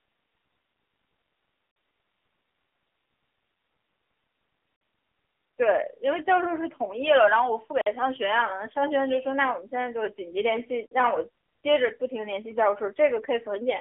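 Speech throughout is squeezed through the AMR narrowband mobile codec at 7.95 kbps: the band runs roughly 300 Hz to 3.4 kHz, with nothing above 3.5 kHz. The voice takes on a plainly audible buzzy, synthetic texture. That texture separates it from a simple telephone-style band filter, which would sound thin but stay clean. At this low bitrate the codec rebuilds the voice from a vocal-tract model fed by a few pulses per frame rather than from the waveform itself. There is also a gap between chunks at 1.71, 4.76 and 7.81 s, each a 50 ms silent hole, falling after every 3 s of audio. Unlike packet-loss dropouts, the holes are evenly spaced, and no sound goes missing across them. The audio simply pauses at each join and resumes where it stopped. That points to chunked playback with silence inserted at each boundary.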